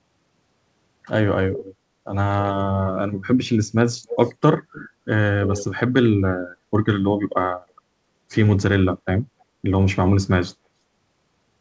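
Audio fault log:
1.57 to 9.44 s (at 1.57, 4.06, 4.73, 5.43 and 9.4 s), echo leak: short delayed copies of the speech trail the original by about 300 ms, at loudest about 10 dB down and about 40 dB down at 9.4 s, likely loudspeaker pickup that the far end's echo canceller failed to remove.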